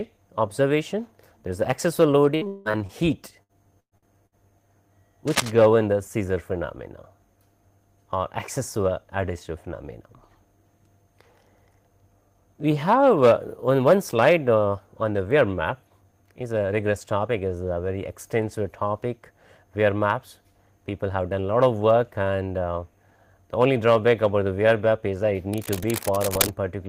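Between 2.35 and 2.92 s, and again from 3.43 to 4.35 s, repeated packet loss chops the audio into a robotic stutter as each gap gets patched by stretching the last bit of sound. At 5.27 to 5.51 s there's a burst of cable scratch noise, rustly and only about 5 dB below the signal, likely from a worn cable or connector being moved. From 8.59 to 9.31 s a jitter buffer speed-up kicks in. Around 50 ms of pitch periods get trimmed so the audio runs at 106% with unchanged pitch. It happens again at 20.98 to 21.36 s, harder this time at 114% with about 70 ms removed, and sounds noticeably rushed. The scratch noise returns from 25.53 to 26.51 s at a similar level.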